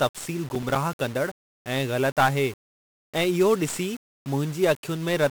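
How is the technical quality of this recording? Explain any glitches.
The quality's pretty rough. The whole thing is heavily degraded by low-bit-depth coding, and there's one short glitch near the start.

1-bit DFPWM compression runs the full length of the speech. The coder saves only one bit per sample, nudging a running level up or down, so it can't track the waveform closely. That leaves dense broadband noise everywhere: the speech comes across fuzzy and crackly, and the treble is buried under hiss. The damage is heavy, which fits a stream of about 48 kbps.

Processor overload crackle shows up from 0.55 to 0.76 s. The system couldn't finish its tiny audio buffers in time, and several deadlines slipped in a row. Each miss dropped in a brief slice of silence with hard edges. It sounds like a handful of buffers of roughly 5 ms each. Strung together, those gaps make a quick burst of gritty tearing over the speech, and it clears once the load eases.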